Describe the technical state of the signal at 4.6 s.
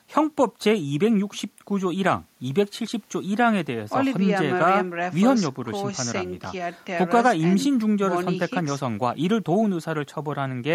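At 4.6 s the speech signal is intact, with no dropout, clipping, distortion or other fault audible at that moment.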